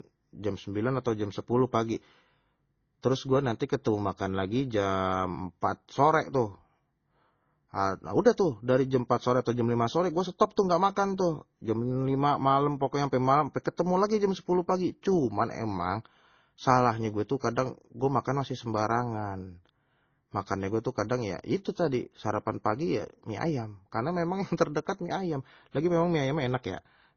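Transcoding between lossy codecs runs throughout the speech, from start to finish. Nothing above about 6.8 kHz survives, and the remaining band carries two layers of artefacts at once: smeared, swirly highs and pre-echo typical of low-rate MP3, overlaid with Opus-style noisy, buzzy texture. The likely cause is an encode at a very low MP3 rate, around 24 kbit/s, later re-encoded to Opus near 32 kbit/s, which spent its bits reproducing the first codec's damage.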